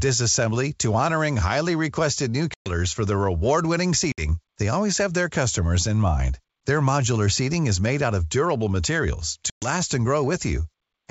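At 2.54 s, after "honoring highly requested new", a hard-edged 120 ms silence hits, classic ADPCM packet loss. The decoder's predictor and step size drift, so speech resumes slightly distorted before settling. Same at 4.12 s (60 ms, before "they always have their") and 9.50 s (120 ms, after "out of durable materials").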